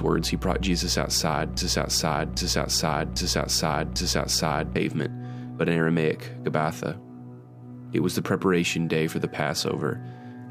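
From 1.57 s to 4.76 s the audio falls into a broken-record loop: a fragment about 0.8 s long plays four times back to back, identical each pass, and whatever should have sounded in those three seconds never arrives. This is likely a player, encoder or stream that stalled and kept resending its last buffered piece. On a waveform or spectrogram the same block appears copied side by side, with hard seams every 0.8 s.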